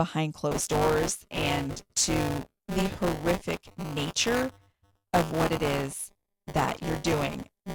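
From 0.51 s to the end there's buffer tearing, a steady 200 Hz robotic rattle: writer and reader slipped, so a small slice of each period replays audio roughly 15 ms old.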